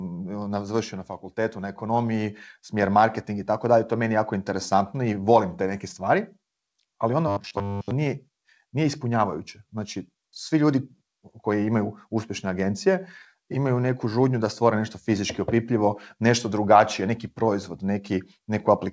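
From 0.05 to 1.16 s the automatic gain control judged the incoming level too high and pulled its gain down gradually, by about 6 dB. This is automatic gain falling: the opening of the speech starts out loud and then sinks over roughly a second, with the background noise sinking along with the voice, so the room seems to recede together with the talker rather than the voice alone getting quieter.

Between 1.55 and 3.57 s the control swings the other way and shows automatic gain rising. Having now decided the input was too quiet, it raised its gain step by step, again by about 6 dB over roughly two seconds. Voice and background swell together, so the noise floor climbs alongside the speech until the level settles just before "dalje to je meni".

From 7.28 to 7.91 s the audio shows robotic sound from repeated short buffers. The likely cause is fresh audio arriving too seldom, so that the playback side kept looping the last short block, around 10 ms long, while the real signal in between was dropped. 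That looping covers most of this stretch and stamps a fixed 100 Hz buzz onto the speech, giving a rigid, metallic drone that only loosely follows the syllables. Through all of this the call path's G.722 coding leaves nothing above 8 kHz.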